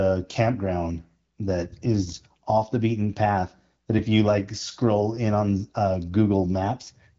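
No technical faults can be heard in this speech clip.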